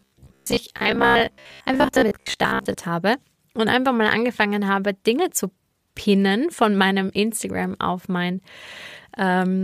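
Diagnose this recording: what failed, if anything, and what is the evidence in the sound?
From the very start to 2.77 s, the speech has a robotic sound from repeated short buffers. A rigid, metallic buzz sits at about 67 Hz, and the speech follows only roughly beneath it. The buzz clears just before "habe und einfach mal". The fault is likely at the driver or buffer stage. A 67 Hz pitch means a 15 ms fragment is looping. Roughly half the audio is repeated filler, and the real signal in those gaps is lost.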